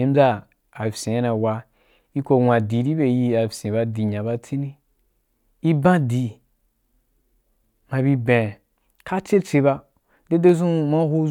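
At 10.49 s a single sharp click, likely dropped samples: the waveform skips a tiny fraction of a millisecond, removing no sound, unlike a dropout.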